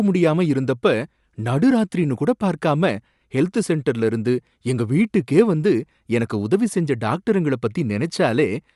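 From start to finish the speech has a breathy, grainy edge and nothing above 11.5 kHz, most likely Bluetooth LC3 compression. The transform codec has thinned the upper band and filled it with noise, plainly audible here, which fits 48 kbps in 10 ms frames.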